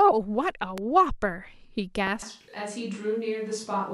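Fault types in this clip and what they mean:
Loud pop: Two sharp pops at 0.78–0.80 s and 2.07–2.09 s, likely electrical pulses, spiking about 10 dB above the speech; waveform shows tall spikes, spectrogram thin vertical broadband lines.
Switch to a distant microphone: From 2.22 s to the end the speech turns roomy and hollow, about 5 dB quieter with faint room noise, likely a farther microphone; spectrogram shows weaker lows and smeared onsets.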